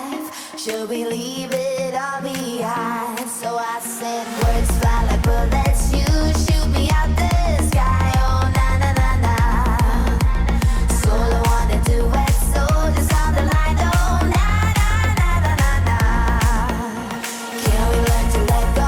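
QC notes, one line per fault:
No fault found.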